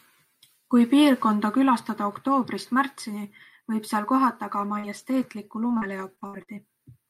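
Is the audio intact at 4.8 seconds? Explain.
No. At 4.8 s the audio falls inside a stretch of repeated packet loss (robotic sound) running from 4.59 to 6.49 s. Seven gaps, the longest 60 ms, are patched by extending the preceding sound, giving choppy speech with pieces missing.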